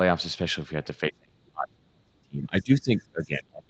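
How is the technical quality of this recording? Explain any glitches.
The recording has one clear problem. From 1.09 s to the end, the speech is pushed down hard, by around 35 dB at its deepest. This is likely speech suppressed in double talk. The echo canceller couldn't separate the talker from far-end echo, so it turned both down. The band stops near 8 kHz, which fits a 20 kbps Opus call.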